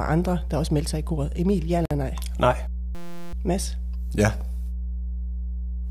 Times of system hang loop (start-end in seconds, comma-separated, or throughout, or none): 2.95-3.33